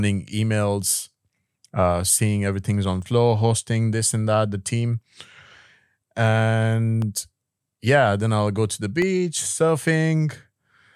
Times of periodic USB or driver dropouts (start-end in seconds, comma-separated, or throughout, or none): 1.03-9.02